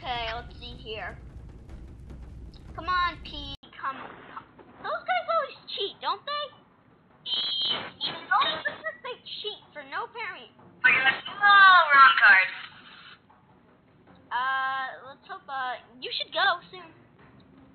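At 3.55 s an 80 ms silence breaks the sound, and from then to the end everything above 4.2 kHz is gone, with a faint new noise floor and no real level change. This is likely an input switched to a poorer device; the gap and changed background set it apart from a simple filter.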